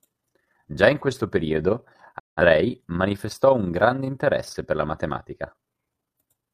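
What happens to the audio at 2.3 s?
At 2.3 s the audio is in a digital broadcast dropout running from 2.18 s to 2.41 s, between "in questo periodo" and "manifestò un grande interesse". The receiver stopped getting usable data and muted until valid frames returned. The sound fades out over about 20 ms, stays silent, then comes back. About 171 ms of programme is missing, which fits roughly four lost frames. What was transmitted during that gap does not resume where it stopped.

The same moment also carries the overlap-add ripple present across the whole clip. Frames were windowed and rejoined with an overlap that does not add up to a constant gain, so the level swings by about 6 dB once per frame, at around 30 Hz. It sounds like a fast, rough flutter on the speech on both sides of the gap.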